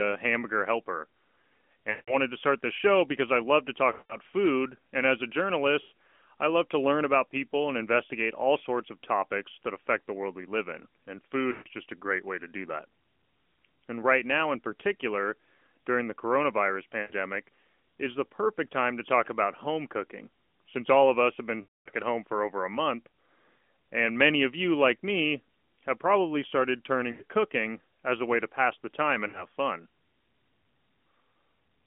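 Speech drags into a smeared, fading smear and comes back weak or rough at 1.90–2.16 s, 3.92–4.17 s, 5.82–5.92 s, 11.52–11.68 s (after "we live in and", before "just a great way"), 17.02–17.12 s, 21.62–21.90 s (after "of us have been", before "at home for over"), 27.12–27.23 s and 29.28–29.46 s (after "to pass the time"). These are lost AMR speech frames: corrupted frames, in gaps of 60 to 240 ms, were filled by repeating the last good pitch and vocal tract settings with dropping gain, over band-limited narrowband audio.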